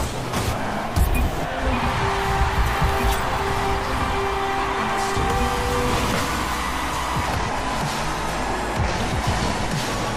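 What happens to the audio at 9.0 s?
At 9.0 s the audio sits inside a section at the wrong speed, running from 7.28 s to the end. It plays at 0.852 times its recorded rate, likely from a mismatched playback clock. Pitch drops about three semitones. Everything sounds deeper and slower.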